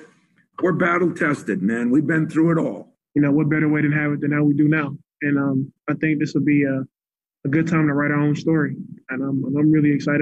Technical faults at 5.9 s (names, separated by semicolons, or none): none